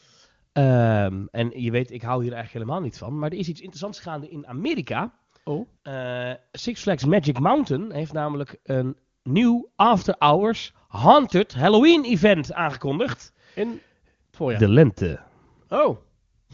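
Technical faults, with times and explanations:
Nothing stood out on listening to this speech clip.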